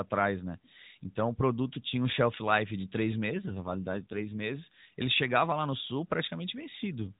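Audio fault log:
3.30–4.45 s, AMR rate drop: for just over a second the speech turns rougher, buzzier and more synthetic, then regains its earlier clarity. The band stays the same and there is no gap. The link adapts by lowering the codec's speech rate and spending the freed bits on error protection, and this sounds like a step down from the 12.2 kbps AMR narrowband mode to about 5.9 kbps. The codec then has too few pulses to model the excitation, so detail thins out.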